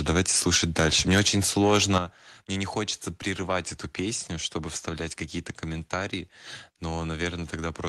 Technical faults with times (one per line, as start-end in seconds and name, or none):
1.60-1.98 microphone overload
1.98 microphone volume stepped down